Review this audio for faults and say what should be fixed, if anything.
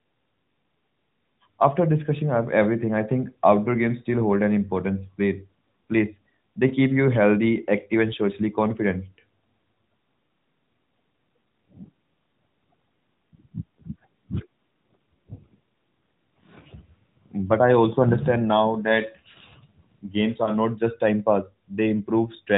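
Lost AMR speech frames: radio errors corrupted one 20 ms frame at 6.68–6.73 s, just before "keep you healthy active", and another at 20.44–20.52 s, before "not just time pass". The decoder filled each gap by repeating the previous pitch and vocal tract settings at reduced gain, so each is heard as a brief dip or warble in the speech. Stronger channel protection, such as more robust channel coding or a lower AMR mode when the radio link is poor, would prevent these losses.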